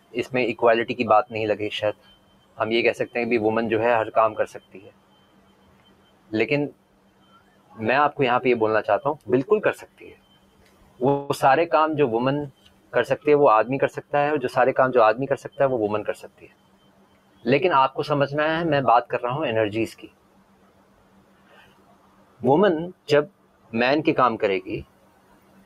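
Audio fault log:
Throughout: noise suppressor applied to music or sounds. A speech-tuned suppressor stays active on this material. It treats steady parts and tails as noise and pulls them down, with level swings of roughly 20 dB. Attacks survive while sustained sound sinks, so the audio pumps and thins.
0.00–0.33 s, 1.93–2.59 s, 4.48–17.45 s, 19.94–25.66 s: sound cut by the noise suppressor. In these stretches the suppressor judges the sound as noise and drops it by up to about 14 dB. Held and decaying sound suffers most. Decays end early, while sharp onsets mostly pass.
11.08–11.31 s: call audio freeze. The sound stalls for 0.21 s and is bridged by a fading continuation of what came just before. Then it resumes exactly where it stopped. Nothing is lost, but a pause is inserted. Late packets draining the jitter buffer are the likely cause.
14.02–16.73 s: jitter buffer speed-up. The audio runs about 7% fast while pitch stays unchanged. 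The receiver trims short pitch-period slices again and again to shed about 200 ms of built-up delay. The passage sounds hurried and its timing loses steadiness.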